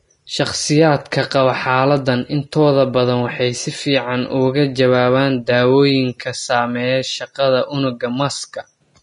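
From start to finish, the speech has no content above about 10.6 kHz. The top octave is simply gone. What remains in the upper range sounds hissy and grainy rather than crisp. Sibilants turn to rough noise, and consonant attacks lose their edge. This is likely Vorbis compression at a low quality setting, which fits a bitrate near 32 kbps. The encoder lowers its cut-off and quantises the treble so coarsely that fine detail is replaced by noise of similar energy.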